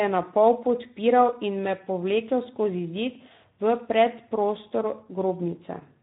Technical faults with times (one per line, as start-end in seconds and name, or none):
0.00-6.03 Speex codec